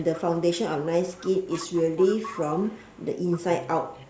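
A faint delayed copy of the speech trails it by about 245 ms, from 0.0 to 0.86 s, 1.04 to 2.4 s (strongest there), 2.58 to 3.63 s, and barely audible from 3.93 s to the end. This is likely echo leak from a far-end loudspeaker that an echo canceller failed to suppress.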